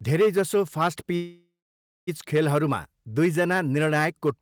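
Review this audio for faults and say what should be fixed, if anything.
Hard clipping runs through the whole recording. The speech is driven about 7 dB past what the signal chain can carry, so a small fraction of samples, on the loudest peaks, are sliced flat. Those squared-off tops generate harmonics high above the voice's natural range, heard as a gritty crackle on stressed syllables and louder moments. To prevent it, lower the input or preamp gain so peaks sit several decibels below full scale.

A call audio freeze runs from 1.15 s to 2.09 s. The sound stalls, then trails into a fading continuation of the last sound that collapses to silence for about 0.58 s, a hold of roughly 0.92 s in all. Nothing is lost. The speech resumes exactly where it broke off, so everything after that point is pushed about 0.92 s later. That pattern likely comes from delayed packets draining the receiver's jitter buffer, which then stretched the last sound while it waited. 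To prevent it, improve network stability or give the jitter buffer more headroom for late packets.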